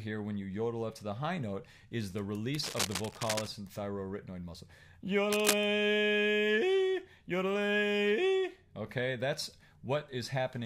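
From 2.63 to 3.48 s, and again from 5.32 to 5.66 s, a burst of cable scratch noise rasps over the audio. It is likely a worn cable, connector or control being moved, so its contact resistance jumps about erratically. The first burst sits a little below the sound, and the second is roughly as loud as it. On a spectrogram each shows as ragged broadband smearing, and on the waveform as dense, uneven spiky fuzz.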